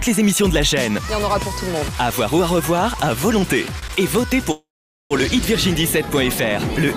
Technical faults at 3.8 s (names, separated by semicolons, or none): short stall from a late packet